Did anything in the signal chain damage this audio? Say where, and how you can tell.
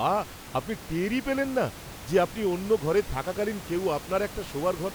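No, nothing in the chain has damaged this speech recording, and the only thing under it is the room's own background noise, sitting about 15 dB below the voice as part of the acoustic pickup rather than anything the equipment added.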